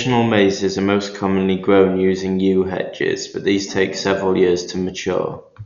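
From start to finish the speech is band-limited, with nothing above 7 kHz, and carries heavy coding damage: a dull, closed-in top end and a rough, fluttering noise clinging to voiced tones. This is likely Dolby Digital compression at a low rate, which fits something near 48 kbps. Starved of bits, the encoder narrows the band and leaves many frequency lines without mantissa data, so the decoder fills those gaps with dither noise that wavers around each harmonic.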